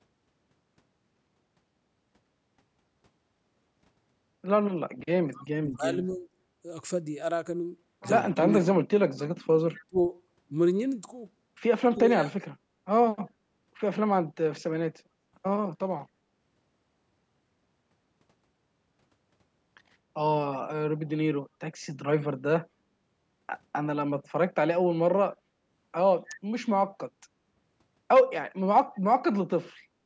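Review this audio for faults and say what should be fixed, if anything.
Echo leak at 5.37 to 5.41 s and 9.78 to 9.85 s. A faint, delayed copy of the speech returns about 240 ms late, around 25 dB below the talker. The likely cause is a loudspeaker on the far side whose echo canceller let some pickup through.

Speech suppressed in double talk at 5.42 to 6.27 s, 8.38 to 8.66 s, 9.87 to 9.98 s, 11.83 to 12.09 s and 12.28 to 12.34 s. The talker dips or drops out in short pieces. Drops reach roughly 35 dB at worst, near 9.9 s. This is likely the echo canceller muting the talker while the other side speaks.

The call microphone processing tops out at 8 kHz, which matches ordinary call bandwidth.

To prevent both faults, use a headset on the loudspeaker side or tune its echo canceller for better echo removal and gentler double-talk handling.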